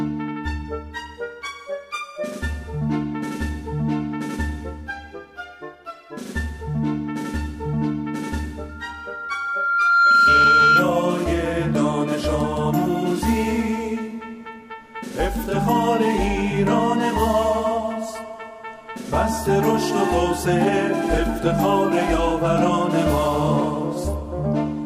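From 8.69 to 10.91 s a single tone near 1.4 kHz swells over roughly a second and a half into a squeal about 10 dB above the sound. That is loudspeaker feedback squeal: a microphone re-captured its own loudspeaker, and at that frequency the loop gain passed one.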